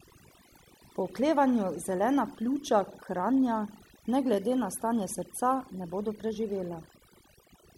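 Speech throughout, with overdone noise removal: the noise reduction was set too strong, cutting bands near its noise estimate, leaving near-silent, twinkling gaps.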